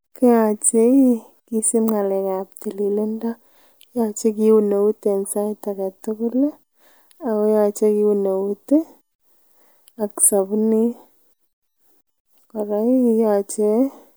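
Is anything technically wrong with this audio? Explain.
No, nothing is technically wrong with this speech recording. There is no fault to explain here.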